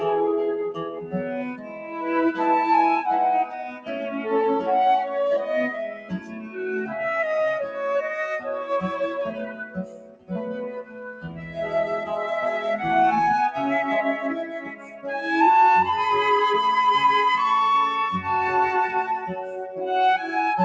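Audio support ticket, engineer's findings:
Noise suppressor applied to music or sounds, throughout: speech-tuned suppressor misreads sustained tones and tails as noise. Gain swings around 10 dB, attacks pass, held material pumps and thins.

Sound cut by the noise suppressor: 0.77–1.14 s, 1.55–1.97 s (both about 8 dB), 3.68–3.95 s (about 11 dB), 5.88–6.6 s (about 12 dB), 9.28–11.58 s (about 15 dB), 14.45–15.07 s (about 13 dB). Decays cut short.

Call path G.722 at 64 kbps, band ends at 8 kHz.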